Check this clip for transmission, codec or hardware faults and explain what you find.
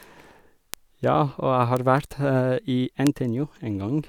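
Three bit error spikes are in the speech, at 0.74 s, 1.77 s and 3.07 s. Each is a flipped bit in one to three samples, reaching about -4, -10 and -4 dBFS, heard as a sharp tick unrelated to the signal. On the waveform each is a lone vertical needle, and on the spectrogram a thin full-band stripe.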